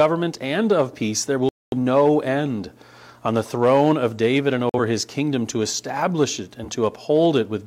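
At 1.49 s the sound drops abruptly into silence until 1.77 s, and again from 4.69 to 4.79 s. These are corrupt frames muted: the decoder rejected damaged compressed frames, and the player filled their slots with silence. The longer gap spans several frame lengths, the shorter one roughly a single frame.

Around 6.63 to 6.68 s a short blip or squeak cuts in, peaking somewhere near -20 dBFS. This is a corrupt frame decoded: roughly one frame with flipped bits was played anyway, so misread values put energy at the wrong frequencies for that brief span.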